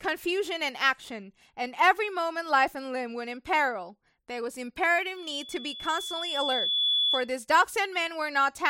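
A single tone at 3.4 kHz swells over about a second and a half into a loudspeaker feedback squeal in this speech, running from 5.16 to 7.31 s and ending about 5 dB above the voice. The microphone is picking up its own loudspeaker, and at that frequency the loop gain exceeds one.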